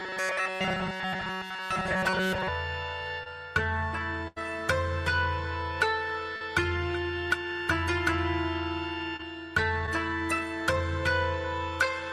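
From 0.01 to 2.48 s the sound has robotic sound from repeated short buffers throughout: a rigid, metallic buzz at 188 Hz, likely from the last 5.3 ms or so being replayed while newer audio is skipped. A spectrogram shows evenly spaced horizontal harmonics locked at that pitch.

At 3.23 to 3.28 s comes the first short concealed packet loss, with about 20 ms missing and a 22 ms fill continuing the preceding sound before blending back. It is heard as a brief smear. Similar patches follow at 6.36 to 6.42 s (40 ms missing, 43 ms fill), 9.16 to 9.23 s (20 ms missing) and 9.86 to 9.89 s (20 ms missing, only a 12 ms fill), each a brief smear or wobble.

Between them, at 4.28 to 4.38 s, a burst of packet loss drops about 80 ms. An 86 ms concealment holds the last sound and fades it, so it becomes a decaying buzz or hiss, and the audio then resumes further on. The waveform shows a tapering envelope, and the spectrogram shows smeared, fading bands before a clean restart.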